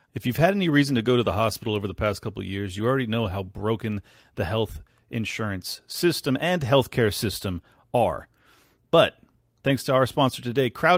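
No technical faults can be heard anywhere in this speech recording; the signal stays continuous and stable throughout.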